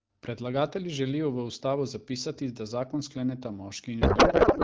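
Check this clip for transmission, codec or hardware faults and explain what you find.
One fault: a codec payload misread from 4.01 s to the end, just after "zapisati da zakon skleneta". The receiver unpacks octet-aligned AMR frames as bandwidth-efficient ones, so every field lands in the wrong place and the speech turns into garbled noise and warble that barely tracks it.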